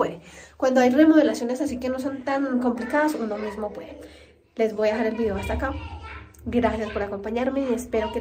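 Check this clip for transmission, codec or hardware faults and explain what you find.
Nothing stood out on listening; the audio gave no sign of any problem along the way.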